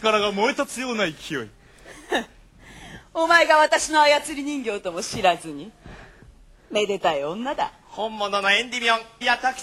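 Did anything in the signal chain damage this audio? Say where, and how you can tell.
Yes. A gritty, inharmonic fizz, around 25 dB down, follows loud and high sounds from 1.06 to 2.75 s. This is crude rate conversion: nearest-sample picking without filtering, which fits a 48 kHz to 44.1 kHz change.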